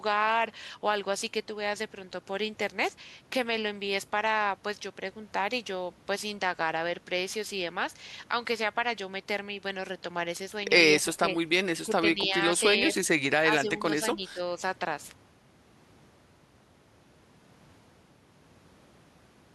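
Between 11.01 and 14.4 s, speech dips at 11.01–11.66, 11.83–12.31, 12.58–12.63, 13.56–13.86 and 14.15–14.4 s, the first by about 20 dB. This is likely speech suppressed in double talk: an echo canceller muting the talker as echo. The waveform shows notched dips, and the spectrogram shows broken energy.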